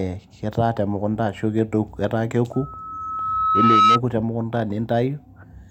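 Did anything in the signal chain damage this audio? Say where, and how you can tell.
Yes, there's loudspeaker feedback squeal in the analogue acoustic path, where the mic is hearing the speaker it feeds. From 2.53 s a single 1.3 kHz tone creeps in under the speech and swells over about a second and a half, ending up roughly 10 dB above it before it stops at 4.0 s. That's the loop gain going past one at that frequency, so the tone just keeps feeding itself until the loop gets broken.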